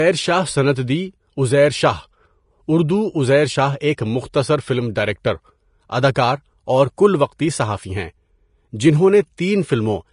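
Throughout, the speech is hissy and grainy with nothing above 10.6 kHz. This is likely Vorbis compression, and unlike steady background hiss, its grain rises and falls with the signal. At 6.15 s, just before "اور کل وقتی صحافی", pre-echo smears a 13 ms hiss ahead of the attack. It comes before the onset, not on it as a click would.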